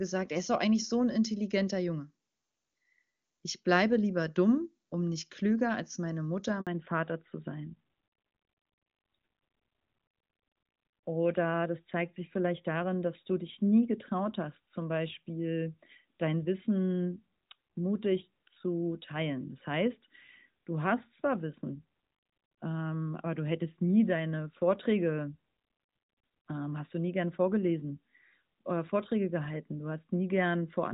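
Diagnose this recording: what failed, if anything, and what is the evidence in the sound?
A handover gap sits in the network stage at 6.61 s. The speech dies away and stays silent for 60 ms, until 6.67 s. The call was moving from one network link to another. No speech frames reached the receiver while the switch ran, so the decoder had nothing to play. The fragment of speech that fell inside those 60 ms is simply gone and cannot be recovered.

A fallback to narrowband follows straight after, at 6.67 s, and lasts to the end of the clip. Before the gap the speech is full and clear, which fits AMR-WB HD Voice at a high rate such as 23.85 kbit/s. After it, nothing remains above 4 kHz. The speech sounds duller, boxier and rougher. This is a codec-stage change. The call dropped from HD Voice to an older narrowband codec, likely AMR-NB at 12.2 kbit/s.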